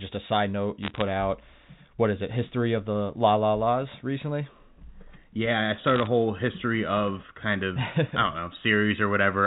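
From 0.83 to 1.01 s and again from 5.84 to 6.07 s, bit errors on a digital phone line break through as bursts of sharp ticks and crackle over unchanged speech. On this G.711 mu-law line, each flipped bit corrupts a single sample, and hits on the sign or high-order bits jump the waveform far from its true value. The error rate sounds to be around half a percent in the first burst and around 0.4 percent in the second, enough to pepper those stretches with clicks above the band-limited telephone sound.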